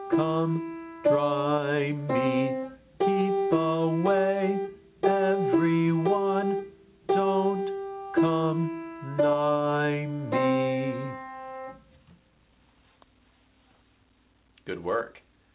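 No technical faults can be heard in this clip, so there is nothing to describe in time order.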